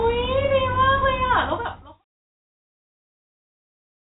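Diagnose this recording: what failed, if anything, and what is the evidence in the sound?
Nothing has failed here: the speech sits in a telephone band with nothing above about 3.8 kHz, as expected from 64 kbps G.711 mu-law coding, and the deliberate fade-out that begins around a second in and finishes at 2.06 s trails off smoothly with no click or hard edge.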